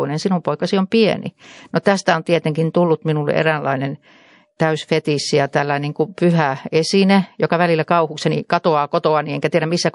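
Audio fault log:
Throughout, MP3 compression: plainly audible watery, swirly treble with smeared attacks, likely from a low bitrate around 48 kbps starving the encoder of bits.
1.83–1.86 s, pre-echo: a 31 ms hiss about 12 dB up precedes the attack before "on tietenkin tullut minulle", noise spread across a long transform block.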